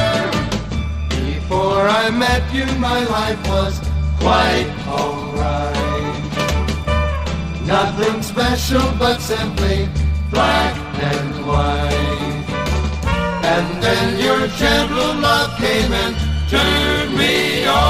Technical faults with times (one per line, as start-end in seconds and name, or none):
none